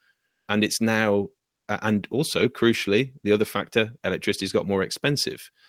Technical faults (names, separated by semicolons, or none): comfort noise in place of the background